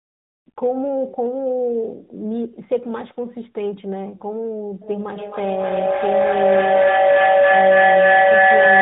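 Throughout, the speech passes through tandem speech coding: two speech codecs in a row, the second recoding the first's already degraded output. The sound suggests ADPCM followed by AMR-NB. Speech turns rough, muffled and warbly, with nothing above 3.8 kHz.

From 4.82 s to the end at 8.81 s, a feedback howl builds as a microphone-to-loudspeaker loop gains level on each pass. It narrows to a tone near 500 Hz, repeating about every third of a second, peaking about 10 dB above the speech.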